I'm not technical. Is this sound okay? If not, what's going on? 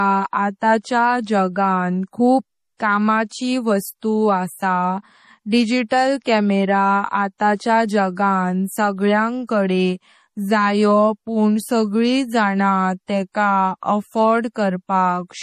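No. From start to finish the speech has a watery, swirly quality, as if heard through moving water, and the very top of the sound is missing, with nothing above about 15 kHz. The damage is plainly audible. This is likely MP3 compression: to make the file small, the encoder threw away the highest frequencies and the quieter details it judged unimportant, and those details flicker in and out from moment to moment.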